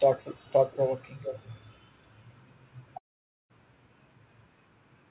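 Speech. An echo leak, likely from a loudspeaker at the far end whose echo canceller let its microphone pick-up return, puts a faint copy of the voice about 450 ms late at 0.17–0.53 s and 0.71–0.78 s, far below the speech, then a clearer scrap at 1.23–1.58 s, still well under it. A long network dropout, likely a stretch of packets that never arrived, leaves a gap from 2.98 to 3.51 s. The receiver fills it with a fading continuation of the last sound that gives way to silence before the speech resumes with the missing part gone.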